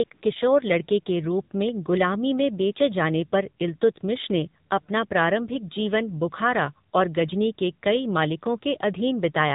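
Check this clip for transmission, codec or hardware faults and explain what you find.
Two faults are present in this speech clip, both typical of a narrowband mobile call path.

Throughout, the AMR narrowband mobile codec is plainly audible. Nothing above 4 kHz survives, and the voice has the buzzy, synthetic quality of a vocal-tract model driven by sparse pulses. The degree of damage fits a low AMR-NB mode of about 7.4 kbps.

AMR comfort noise appears twice, at 0.04 to 0.10 s and 0.14 to 0.22 s, lasting 60 ms and 80 ms. In both windows the sender stopped transmitting speech frames, and the receiver filled the gap with smooth, steady synthetic noise that switches abruptly in and out.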